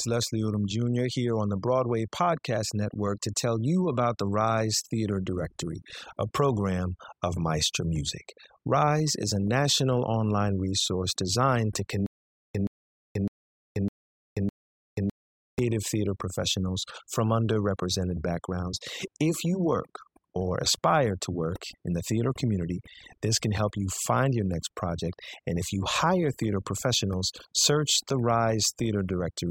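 Overdone noise removal affects the whole speech clip. A noise reduction stage was set too hard. Any frequency band close to its noise estimate gets pushed far down or shut off. Quiet parts of the voice fall below that line and vanish with the noise. The background drops, broken by small twinkling specks.

From 12.06 to 15.59 s there is a stutter with silent gaps. A burst about 124 ms long plays five times. Each is followed by about 483 ms of digital silence, so it returns every 607 ms at an even pace. The likely cause is a stalled player or stream, replaying its last fragment on each retry and then running dry. The audio that belonged in that stretch is gone.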